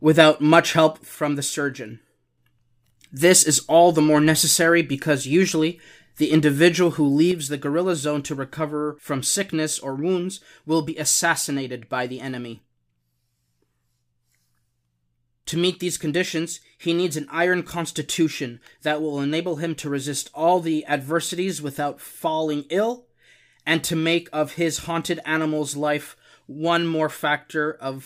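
At 1.15 s the speech drops abruptly by about 6 dB and stays lower until 2.38 s. From 7.31 s it falls the same way and does not recover before the end. The likely cause is one channel dropping out: with one side gone, the mono sum loses half its shared signal. On a waveform the envelope shrinks suddenly at each edge, and a spectrogram dims evenly across all frequencies.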